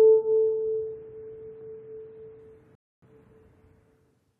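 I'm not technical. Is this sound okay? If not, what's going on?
No. At 2.75 seconds there is a rebuffering stall: the player used up the audio it had downloaded and had to wait for more before carrying on. You hear the sound drop into silence for about a quarter of a second, until 3.02 seconds, and then pick up exactly where it left off. Nothing is skipped or missing. The pause just adds roughly 0.27 seconds to the clip.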